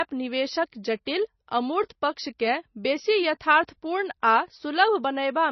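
From start to finish the speech carries heavy MP3 compression damage, most likely from an encoder starved of bits, at a rate that points to around 24 kbps. The treble is cut off hard at about 5.9 kHz, so s sounds lose their hiss and the voice turns dull and watery. On a spectrogram the energy stops at a flat ceiling near 5.9 kHz, and beneath it weak bands blink on and off from frame to frame.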